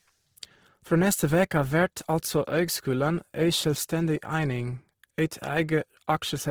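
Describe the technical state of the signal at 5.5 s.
At 5.5 s the speech carries Opus compression, present across the whole clip, likely from the CELT music mode at a rate around 16 kbps. Starved bands are refilled with folded or noise energy, so the sound turns grainy and rough rather than swirling like MP3, and the bandwidth stays full up to about 20.4 kHz.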